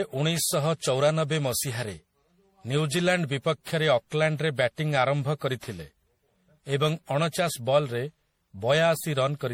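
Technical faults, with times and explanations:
Throughout: generation loss. The speech sounds swirly, smeared and hollow, with blurred attacks, likely from about ten passes of MP3 encoding at a rate fitting 64 kbit/s. Each pass requantises on a shifted frame grid, so a spectrogram shows accumulating holes and speckled noise below a 20.3 kHz ceiling.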